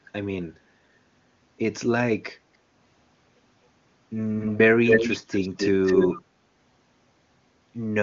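From 4.39 to 4.58 s a delayed copy of the speech trails the original by about 250 ms, somewhat quieter than the talker. From 4.86 to 6.22 s it returns for a longer stretch at roughly the same loudness as the speech. This is likely an echo leak: a loudspeaker's sound reaching a microphone past an incomplete echo canceller. Reverberation would instead smear into a smooth tail, while this is a distinct, discrete repeat at a fixed quarter-second lag.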